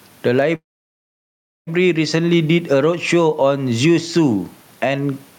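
Gain pumping runs through the whole clip. The level breathes by around 10 dB, with the room's background noise sitting about 43 dB below the speech. It's likely the gain is set far too high, with a fast limiter yanking it down.

At 0.55 s there's a call audio freeze lasting until 1.69 s. The last sound trails off briefly, then about a second of near-silence follows before speech resumes right where it left off. Nothing seems lost, just delayed, most likely from packets held up in transit.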